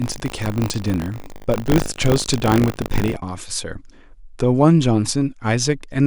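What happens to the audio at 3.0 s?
At 3.0 s the speech carries buffer tearing, running from 0.0 to 3.18 s. A small slice of each period replays audio from a lap earlier, giving a 50 Hz robotic buzz.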